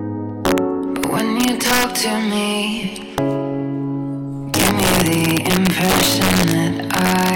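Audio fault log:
0.45–0.58 s, 1.04–2.00 s, 3.18 s, 4.54–6.53 s and 6.91–7.35 s: integer overflow. Loud passages break into violent cracks, much sharper than clipping. They are harshest from 4.54 s, where peaks run about 6 dB over the limit, against about 4 dB at 1.04 s, about 2 dB in the first and last runs, and about 1 dB in the single crack at 3.18 s. Each peak past the largest integer wraps to the opposite sign instead of being limited, flipping across the full range.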